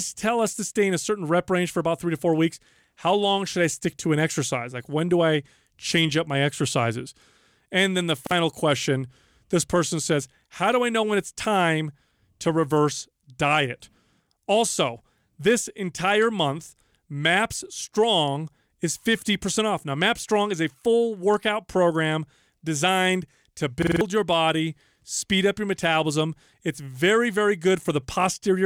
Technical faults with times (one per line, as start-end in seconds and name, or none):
8.27-8.31 repeated buffer
23.82-24.01 repeated buffer